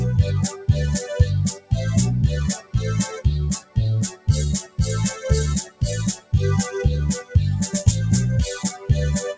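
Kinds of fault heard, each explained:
Noise suppressor applied to music or sounds: A speech-tuned noise suppressor stayed active and treated sustained tones, ambience and reverb as noise. Its gain swings by roughly 10 dB, so the sound pumps and thins while attacks pass through and held parts sink.
Sound cut by the noise suppressor: The suppressor classed particular passages as noise and pulled them down harder, by about 13 dB near 0.52 s, about 17 dB near 1.54 s and across 2.58 to 6.33 s, and about 11 dB near 8.69 s, sinking steady or fading sounds under the band-limited call audio.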